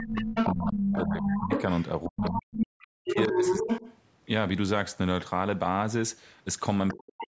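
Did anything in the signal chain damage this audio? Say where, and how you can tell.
Yes. Speech suppressed in double talk hits three stretches: 0.00 to 1.52 s, 2.07 to 3.70 s, and 6.94 s to the end. The talker's level drops sharply, around 20 dB in the first stretch and as deep as about 40 dB in the later ones, each time for roughly a second or less. The stage is call processing. The echo canceller likely couldn't tell the near talker from loudspeaker echo while both sides spoke, so it attenuated everything.

The other side's voice leaking through runs from 0.00 to 3.98 s, at roughly the same level as the talker. A brief, quieter burst about 15 dB down follows at 6.88 s. This is the same call-processing stage: a second voice from the loudspeaker on the talker's device survives in the microphone signal. The canceller likely failed to subtract all of that echo. The band tops out at 8 kHz.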